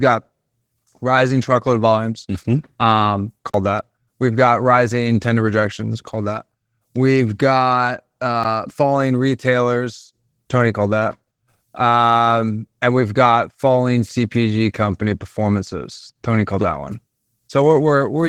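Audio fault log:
throughout: Opus voice compression at 16 kbps in hybrid mode. The low band is coded by linear prediction and the top is a thin transform layer, so the speech sounds plainly hoarse and slightly robotic across the whole clip. Unlike a lowpass, the top band is present but coarse.
3.50–3.54 s and 8.43 s: block of digital silence. The sound drops to silence for about 43 ms, which fits a 2048-sample buffer, and then again for about 13 ms. Unlike a codec dropout, there is no fade or concealment, only an abrupt hole, and the shorter one is heard as a tick or dip.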